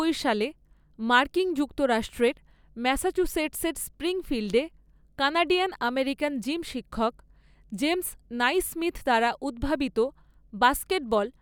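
Mains hum runs under the speech from start to finish: a steady 50 Hz tone with some low harmonics, sitting roughly 35 dB below the speech. Power-line current has coupled into the signal path, most plausibly through a ground loop or a nearby transformer.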